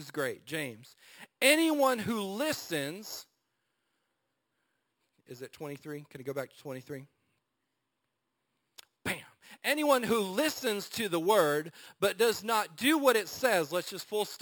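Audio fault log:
throughout imaging from sample-and-hold upsampling: samples were simply repeated with no smoothing filter, which fits a 12 kHz source raised to 48 kHz. A mirrored copy fills 6 to 12 kHz about 14 dB down, a metallic fizz following the speech, moving against its pitch.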